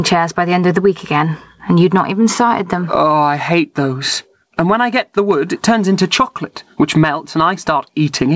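Gain pumping runs through the whole speech clip. The gain swings by about 25 dB around the talker. The likely cause is input gain set far too high with a fast limiter or compressor clamping down on every peak, which pulls loud and quiet passages toward the same level and leaves the speech squashed. All of this sits inside a band that stops at 8 kHz, consistent with a G.722 call at 64 kbps.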